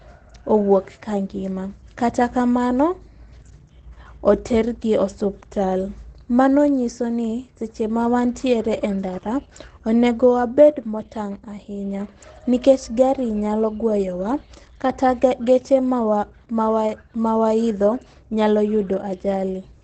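Speech runs the whole clip muffled and hoarse, with nothing above 9 kHz and heavy damage. That points to likely Opus compression in its SILK speech mode at wideband, which fits a rate near 12 kbps.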